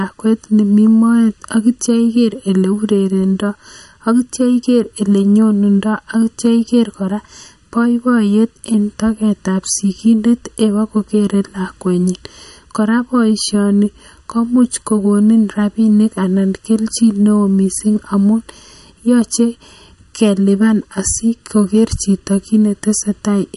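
From start to finish there's a channel delay (comb filtering) problem: one side arrives roughly 0.7 ms late, and once the two are folded to mono the shared sound cancels in evenly spaced notches starting somewhere around 700 Hz. That leaves the speech hollow and phasey the whole way through.

Running alongside it, the top end stops dead at 11.3 kHz, and the s sounds carry a watery, swirly shimmer with metallic chirps and soft, smeared attacks. That's very likely MP3 compression, and the plainly audible damage points to a low bitrate, around 48 kbps.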